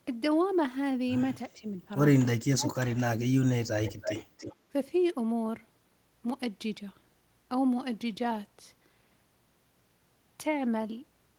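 Speech suppressed in double talk occurs at 1.54 to 1.77 s, 2.45 to 2.87 s and 3.04 to 3.67 s. The cause is likely an echo canceller that could not tell the near talker from loudspeaker echo while both sides spoke, so it pulled everything down. The first dip is shallow, about 10 dB. The second nearly cuts the speech out, at about 40 dB. The third drops about 30 dB.

Echo leak follows from 3.85 to 4.55 s, where a delayed copy of the speech trails the original by about 319 ms, roughly 10 dB below it. The likely cause is a far-end loudspeaker setup whose echo canceller failed to remove everything its microphone picked up, so the residue travelled back down the line as a faint, late repeat.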